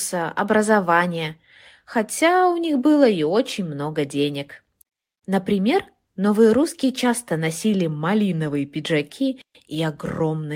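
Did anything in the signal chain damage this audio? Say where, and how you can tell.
No, nothing in this speech recording stood out on listening as damage from any stage of the signal chain.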